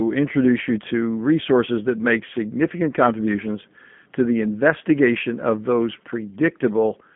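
G.729 codec damage runs through the whole speech clip: the sound is rebuilt from a vocal tract filter and a pitch predictor with a few pulses per frame, which fits an 8 kbit/s G.729A coder. The band is confined to roughly 150 Hz to 3.4 kHz, nothing above 3.6 kHz survives, and the damage is plainly audible, with the voice sounding slightly rough and synthetic.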